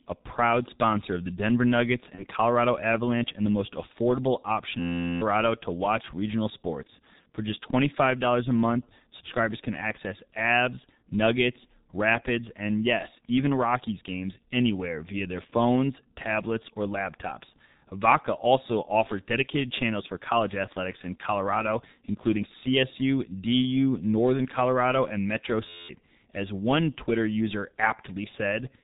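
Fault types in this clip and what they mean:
G.723.1 codec: throughout the speech, this low-rate telephony codec at about 6.3 kbit/s, working in 30 ms frames, strips everything above 4 kHz and tracks the voice slowly, so the talker sounds muffled and hoarse, with consonants smeared together.
VoIP packet loss concealed by the speech codec: at 2.15 to 2.24 s, one 30 ms frame goes missing and the decoder fills it by extending its last pitch and filter while fading the gain, leaving a brief stretched smear and weakened speech just afterwards.
System hang loop: at 4.80 to 5.21 s, between "the most affordable option" and "to watch regional sports", and again at 25.68 to 25.89 s, an 11.61 ms slice repeats exactly, giving an 86.1 Hz buzz that fits a 512-sample buffer and covers roughly 400 ms and 200 ms of speech.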